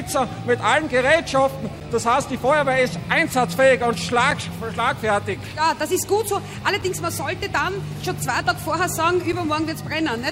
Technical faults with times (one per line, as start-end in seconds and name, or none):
4.31 gap between chunks
6.82 gap between chunks
9.32 gap between chunks